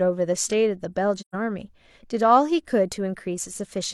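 At 1.18 s the speech fades away into silence and fades back in by about 1.35 s, leaving a soft-edged hole in the middle of the sound rather than a hard cut. This is AAC frame loss with muting. About 128 ms of coded audio never reached the decoder, which fits roughly three lost frames. The decoder filled the gap with an empty spectrum, and the overlapping transform windows on either side ramped the signal down and back up.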